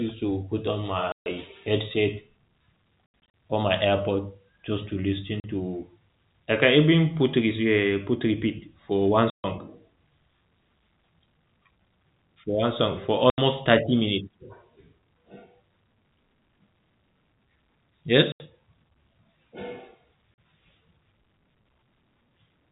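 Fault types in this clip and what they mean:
packet loss filled with silence: speech drops to dead silence for 40 to 140 ms, lengths fitting 20 ms packets, with hard edges instead of repeated or smoothed sound.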